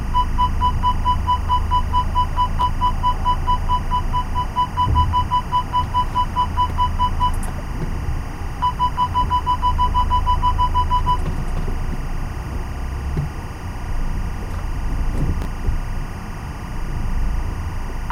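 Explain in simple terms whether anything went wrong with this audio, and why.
Timecode bleed runs the whole way through: a timing signal from a nearby cable or track leaks in, adding a chirpy warble that switches between roughly 1 and 2 kHz.

Chunks out of order at 2.61 to 2.63 s and 15.42 to 15.45 s: 10 ms pieces arrived late, so the sound briefly scrambles.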